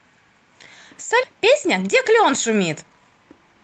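At 1.23 to 1.25 s a stretch of speech, about 0.4 s, was dropped, and playback resumed from audio that was already waiting. Nothing fills the gap, so this skip ahead joins the two sides almost directly. The listener hears an abrupt jump, as if part of a word or a short phrase was cut out, with the end delay drop of roughly the same amount.

From 1.33 s to the end, the jitter buffer was still holding more audio than its target, so it kept cutting out short pitch-period-length pieces to catch up, shedding about a fifth of a second in total. This jitter buffer speed-up makes the speech run at about 109% of normal speed with the pitch unchanged, so the rest of the clip sounds rushed and clipped in rhythm. Throughout, the call path tops out near 8 kHz, which fits Opus at around 24 kbps.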